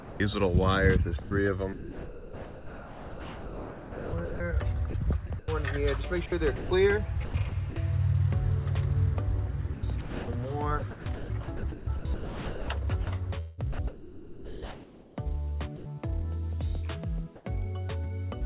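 From 0.0 to 0.2 s the opening of the sound is missing: instead of the first 170 ms of material there is only a steady, featureless hiss. This is sound dropped by the voice detector. The sender's detector likely judged the start as background and held back transmission, so the receiver filled the gap with synthetic comfort noise until the detector caught up and real audio resumed.

Between 1.22 and 7.76 s the sound turns choppy, with pieces repeatedly vanishing into flat hiss. About 3.2 s of that stretch is replaced. The same pattern returns from 9.74 to 15.86 s, again with about 3.2 s replaced. Both stretches are sound chopped by the voice detector. The sender's detector most likely toggled on and off several times, and each off period was covered with comfort noise. Throughout, nothing comes through above 4 kHz, which points to a narrowband call codec.

From 17.36 to 17.45 s the background briefly loses its natural detail and becomes an even, characterless noise at the same level as before, about 25 dB below the loud parts. 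This is comfort noise in place of the background. For those 90 ms the sender likely paused transmission during what it took for silence, and the receiver substituted synthetic noise shaped to match.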